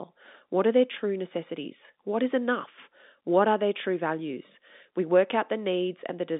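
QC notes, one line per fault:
No faults found in this clip.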